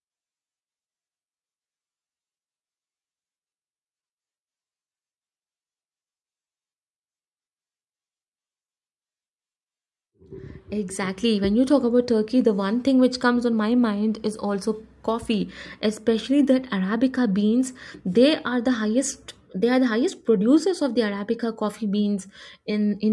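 No technical faults can be heard anywhere in the recording; the signal stays continuous and steady throughout.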